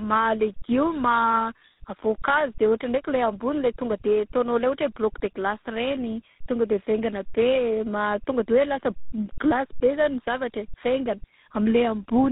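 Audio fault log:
Throughout: tandem speech coding, the speech passing G.726, G.711 and GSM full rate coders in turn; roughness compounds beyond any single codec, and nothing sounds above 3.8 kHz.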